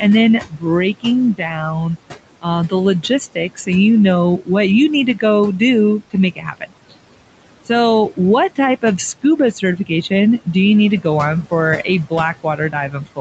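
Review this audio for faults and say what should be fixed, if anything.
The noise suppressor artifacts run through the whole clip. The suppressor pulls the steady room noise down by about 18 dB wherever it thinks there's only background, so the noise floor drops away between phrases and comes back up underneath the speech whenever someone talks. You end up hearing the background switch in and out along with the talker instead of sitting at a constant level. The fix is to ease off the suppression depth or lengthen its release, so the noise floor stays steadier between phrases.

Speech cut by the noise suppressor happens six times. It shows up at 0.41 to 1.97 s, at 2.42 to 3.69 s just before "you know", at 4.38 to 4.5 s and at 5.99 to 6.94 s. It happens again at 9.23 to 10.11 s, between "so what type of" and "do you need to", and from 12.43 s to the end, right after "go on for a". In each stretch the suppressor treats quieter bits of speech as noise and drops them by about 14 to 19 dB. 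Consonants and word endings come out swallowed, sometimes for a few hundred milliseconds inside a stretch. The fix is to raise the speech-detection sensitivity or cap the maximum gain reduction, so that soft speech isn't classed as noise.

The room noise sits about 16 dB under the speech, and the call path tops out around 8 kHz, which fits a wideband Opus setup.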